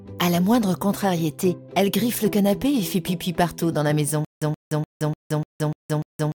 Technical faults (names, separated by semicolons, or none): stutter with silent gaps